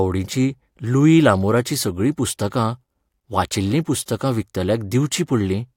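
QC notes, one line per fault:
No faults found on listening; nothing to log for this speech clip.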